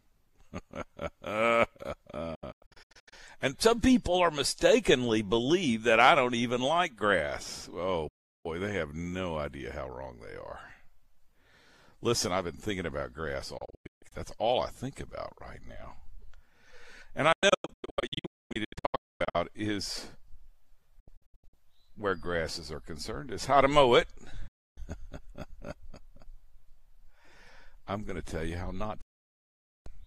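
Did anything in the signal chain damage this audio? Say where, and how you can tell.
Yes: a digital broadcast dropout at the receiver. The audio mutes at 2.35, 8.08, 13.58, 17.32, 20.99, 24.47 and 29.01 s, cutting in 8 ms fades and sometimes breaking into short holes. The muting pattern fits 24 ms frames failing their checks, and that programme material is lost.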